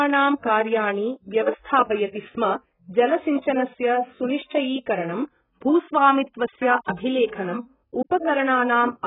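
From start to finish, the speech was likely squeezed through AAC compression at a very low bitrate, roughly 8 kbps, leaving too few bits per frame. Nothing survives above 3.8 kHz, so the voice sounds dull and muffled, with heavy smearing and a warbling, fizzy texture.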